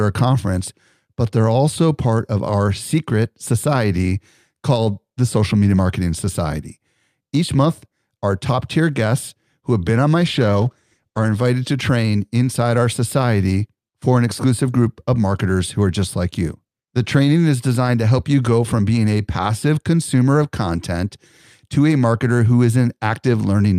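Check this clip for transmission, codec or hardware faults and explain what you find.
There is one fault: a call bitrate drop from 10.2 s to 11.39 s. For just over a second the speech turns rough and watery, and the top end goes dull and muffled. The call's bandwidth estimate fell, so the encoder spent far fewer bits, quantised more coarsely and trimmed the high frequencies. The sound fits a cut from about 64 kbps to 16 kbps.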